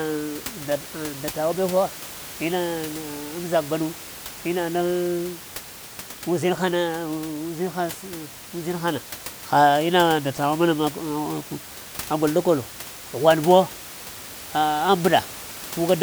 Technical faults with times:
none

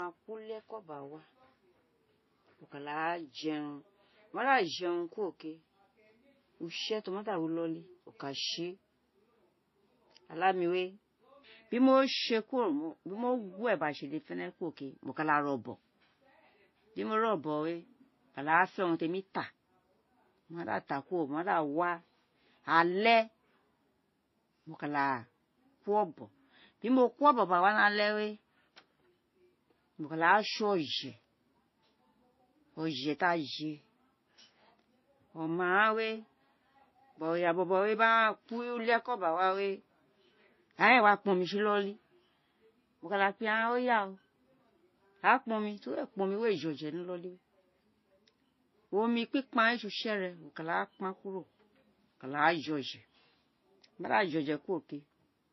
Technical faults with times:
0.00-55.52 transcoding between lossy codecs

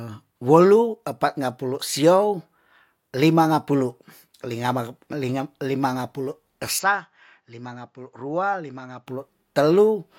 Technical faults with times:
6.79-9.07 input switched to a poorer device

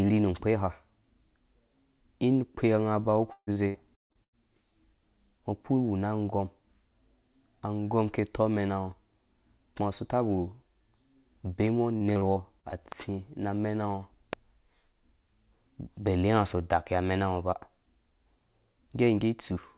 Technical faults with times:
3.32-4.36 repeated packet loss (robotic sound)
11.98-12.75 repeated packet loss (robotic sound)

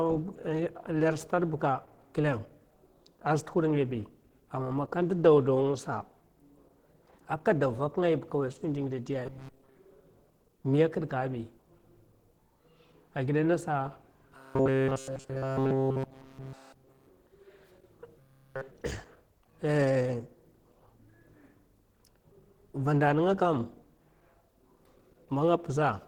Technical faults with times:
0.00-26.08 Opus compression
9.26-9.75 robotic sound from repeated short buffers
14.37-17.09 robotic sound from repeated short buffers
18.19-18.71 robotic sound from repeated short buffers

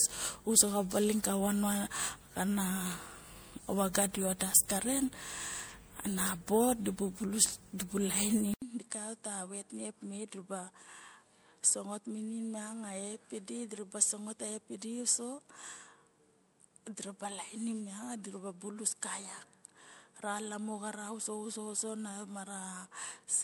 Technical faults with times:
0.00-23.43 generation loss
8.54-23.43 input switched to a poorer device

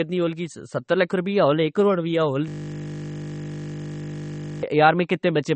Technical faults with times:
0.00-5.55 MP3 compression
2.48-4.63 system hang loop

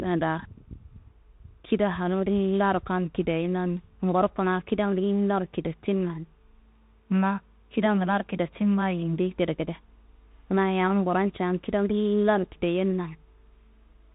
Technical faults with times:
0.00-14.14 Bluetooth CVSD headset codec

